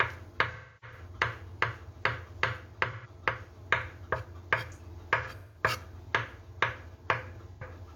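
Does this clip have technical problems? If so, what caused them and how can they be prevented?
Yes, there's AAC frame loss with concealment in four spots: 0.52 to 0.98 s, 2.91 to 3.08 s, 5.22 to 5.62 s and 7.54 to 7.63 s. The decoder fills each gap by reusing the last good spectrum, so short gaps sound smeared and phasey. The first patch has about 341 ms missing, with one run of roughly a third of a second. Adding error protection or retransmission on the stream would prevent it.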